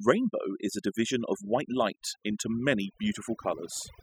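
Overdone noise removal runs throughout: bands near the noise estimate are cut away, leaving near-silent, twinkling background and quiet voice detail missing.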